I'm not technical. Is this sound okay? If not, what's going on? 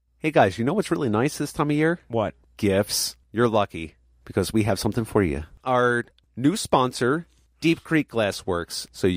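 Yes, this sound is okay, with nothing wrong going on in it.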